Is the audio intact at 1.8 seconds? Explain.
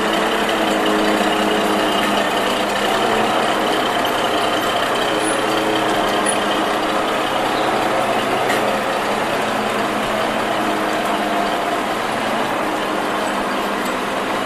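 Yes, the audio is intact at 1.8 seconds, with no dropout, click, distortion or other fault audible at that point.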